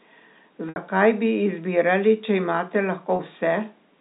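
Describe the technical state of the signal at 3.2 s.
Right after "bi izbirali če imate", from 3.16 to 3.19 s, there's a packet loss with pitch repetition: about 30 ms went missing and the last pitch period was looped over the gap, so you hear a brief held, buzzy smear.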